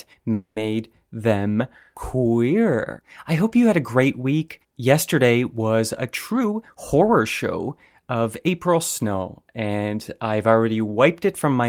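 From 0.33 to 0.72 s there is a call audio freeze: the sound stalls and the last fragment is stretched into a fading buzz, with about 10 ms of silence, before resuming where it stopped. The likely cause is delayed packets draining the jitter buffer, adding roughly 230 ms of filler. A spectrogram shows smeared, frozen harmonic bands.

Jitter buffer speed-up follows from 6.33 to 7.21 s at 118% speed, trimming around 150 ms, and again from 7.69 to 9.05 s at 105%, trimming about 70 ms. Pitch is unchanged but the speech sounds hurried. Syllable blocks appear squeezed together in time on the spectrogram while harmonic spacing stays the same.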